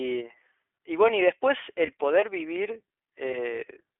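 All the way through, the speech carries the iLBC codec's narrowband sound. Nothing gets past roughly 300 Hz to 3.5 kHz, and the coding roughness is plainly audible, a slightly synthetic edge that fits iLBC's 15.2 kbps mode with its 20 ms frames, each coded on its own.

At 1.86 s there's a brief 20 ms patch of lost iLBC frames, which points to a single dropped frame. The decoder covers it by repeating the last pitch cycle with some noise mixed in, so you hear a tiny held, buzzy bit. The speech snaps back right after, since iLBC frames stand alone.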